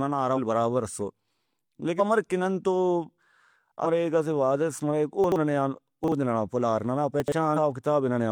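Speech, marred by two faults. Damaged data in the compressed stream causes brief chirps or blips at 0.33–0.38, 1.95–2.01, 3.81–3.87 and 7.53–7.58 s. The decoder loses sync and searches for the next frame header. Chunks out of order cause garbled moments at 5.24–5.36, 6.04–6.12 and 7.20–7.32 s. In each, a 40 ms chunk plays one or two chunks late, jumbling the order with nothing lost.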